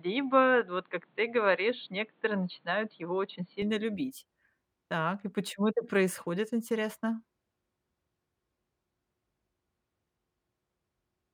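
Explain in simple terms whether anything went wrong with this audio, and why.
For the first 3.6 seconds, the speech sounds dull and boxy, as if heard through a cheap phone, with a faint new hiss in the background. At 3.62 s it suddenly opens up and sounds clear, with no gap and no jump in loudness. This is most likely an input switched to a poorer device: the recording began on a lesser microphone or headset that captured nothing above about 4.4 kHz, then changed to the better one.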